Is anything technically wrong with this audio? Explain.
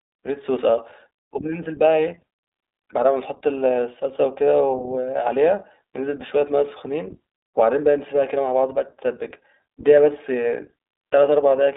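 Yes. The speech runs through the iLBC codec from start to finish. Nothing above 3.8 kHz survives, and the low end is thin, which fits a 300 to 3700 Hz telephone band. iLBC codes each short frame's excitation on its own, without borrowing from the frame before. The coding uses 20 ms frames and the 15.2 kbps mode. The coding damage is plainly audible. The voice sounds muffled, slightly rough and synthetic.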